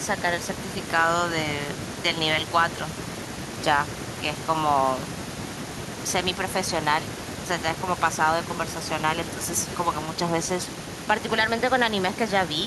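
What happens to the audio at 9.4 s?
Nothing goes wrong at 9.4 s: the speech runs through that moment intact, with no dropout, click or other audible fault.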